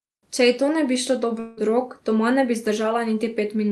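Likely a long network dropout: no audio arrived from 1.39 to 1.59 s, after "to ne bi šlo", so a fading buzz bridges the gap to "rok doma ne bi".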